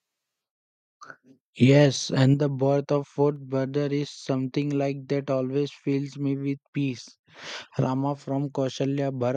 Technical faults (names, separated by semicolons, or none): microphone overload; microphone volume stepped down